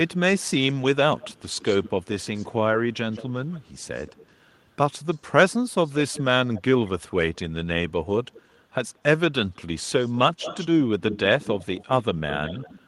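A faint delayed copy of the speech trails behind it from 0.1 to 4.34 s, about 160 ms late and about 20 dB down; again from 4.98 to 7.36 s at 171 ms, similarly quiet; and from 8.33 to 12.87 s at 183 ms, a little stronger, about 15 dB down. This echo leak likely comes from a far-end loudspeaker whose echo canceller left part of the microphone pickup in place and sent it back.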